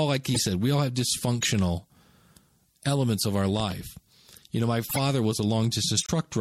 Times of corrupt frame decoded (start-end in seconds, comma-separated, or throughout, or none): 0.34-0.39, 1.41-1.46, 4.89-4.99